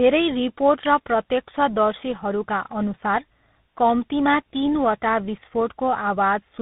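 From start to finish the speech carries tandem speech coding. It passed through GSM full rate, then G.711 A-law, then CVSD, so two speech coders degraded it in sequence. Nothing reaches above about 3.8 kHz, leaving it muffled, rough and warbly.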